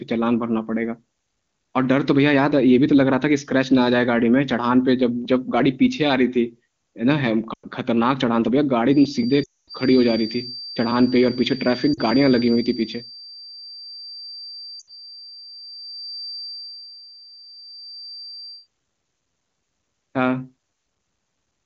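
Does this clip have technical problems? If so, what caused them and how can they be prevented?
Yes, lost AMR speech frames at 7.53–7.66 s (100 ms), 9.44–9.70 s (240 ms), 11.93–12.00 s (40 ms) and 14.79–14.88 s (80 ms). The decoder held the last good pitch and vocal tract settings at falling gain, so each gap sounds like smeared, fading sound rather than the hard silence of a plain dropout. Each run drops to near silence within two frames, and the voice comes back weak or rough for a moment. Elsewhere the wideband coding is clear. Better radio coverage or stronger channel error protection would keep frames from failing their checksum.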